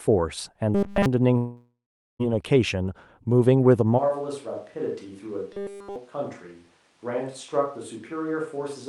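From 0.75 to 1.06 s the speech turns into a rigid metallic buzz at 200 Hz, robotic sound from repeated short buffers, likely a 5 ms block looped while fresh audio ran late. It is steady rather than fading, which separates it from a dropout. From 1.37 to 2.21 s a long network dropout likely removes about 0.82 s: a decaying fill gives way to about 0.44 s of silence, and the speech resumes further on. At 4.00 s the sound abruptly turns hollow and roomy, about 10 dB quieter, with room noise roughly 30 dB below the speech. This likely marks a switch to a distant microphone and lasts to the end. It is a sudden, sustained change in tone, not a brief glitch. From 5.53 to 5.96 s the same 200 Hz robotic buzz returns.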